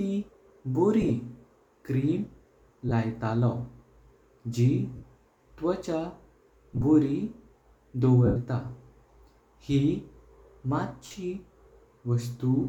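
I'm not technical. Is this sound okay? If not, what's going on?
No. The Bluetooth link dropped small chunks of sound, which is called lost LE Audio frames. Each time, the receiver filled the gap by repeating the last bit of sound with its detail scrambled, so the voice briefly turns into a hissy smear. It happens at 1.02–1.10 s, 2.89–2.92 s, 4.96–5.03 s, 6.74–6.83 s, 8.26–8.37 s and 11.06–11.14 s. The longest gap, at 8.26 s, lasts 100 ms and fades toward silence.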